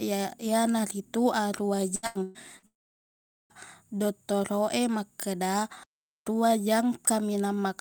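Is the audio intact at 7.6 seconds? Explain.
Yes, the audio is intact at 7.6 seconds, with no dropout, click, distortion or other fault at that moment.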